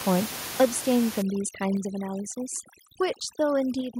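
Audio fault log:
0.60–0.65 s microphone overload: The peaks at this moment run about 5 dB past the converter's ceiling, most likely because the microphone input volume was set too high, so around a tenth of the waveform has its tops sheared flat, giving a harsh, crackling edge.
0.65 s, 1.77 s, 3.81 s microphone volume stepped down: The level drops abruptly by about 3 dB, then about 4 dB, then about 4 dB again, likely the call software trimming the device's input volume after judging it too hot. Voice and background sink together in single steps, the first right after the clipped burst.
1.22–4.0 s overdone noise removal: Noise reduction set far too strong starts cutting frequency bands that sit near its noise estimate, taking quiet parts of the speech with them. The room noise, which lay about 13 dB under the speech, drops and breaks up into twinkling, warbling specks.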